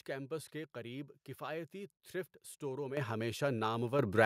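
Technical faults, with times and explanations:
2.97 s and 3.99 s, microphone volume stepped up: right after "کفایتی تھرفٹ اسٹوروں میں" the speech and the background noise both jump louder at once, by about 10 dB, and at 3.99 s they jump again by about 6 dB. The rise is a sudden step, not a gradual swell. That happens when call software judges the microphone too quiet and raises the device's input gain in a single move, lifting everything the microphone picks up by the same amount.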